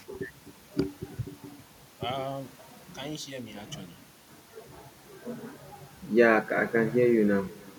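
Throughout the speech, every phrase is trailed about a third of a second later by a faint, thin copy some 24 dB down: echo with no canceller, the far end's loudspeaker feeding its microphone back.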